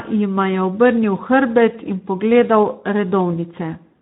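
Speex codec damage runs throughout this short speech clip, plainly audible from start to finish. The encoder's sparse excitation budget leaves the speech hoarse and noisy, which fits a low-quality setting near 11 kbps.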